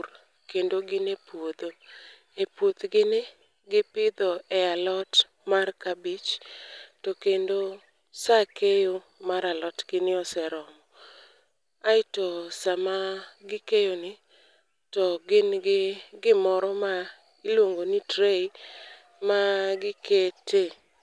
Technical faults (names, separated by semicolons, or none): none